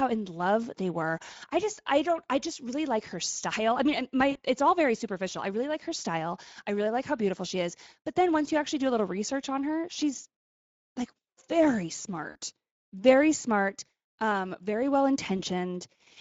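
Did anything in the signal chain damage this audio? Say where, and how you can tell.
Yes. At the codec stage, Speex damage runs through the whole speech clip. The voice has a noisy, hoarse grain, which points to a middle quality setting around 16.8 kbps. At that rate the CELP excitation is coarsely coded, so the voiced sound loses its clean pitch structure.

At the network stage, there is VoIP packet loss concealed by the speech codec in three places. The first is at 4.31–4.37 s, after "her style i mean". The second is at 12.29–12.37 s, after "like very". The third is at 15.37–15.42 s, after "smart um very well". Each gap turns into a short, fading smear. The gaps fit about 40, 60 and 20 ms of lost packets, which the decoder filled by extrapolating its last pitch and filter.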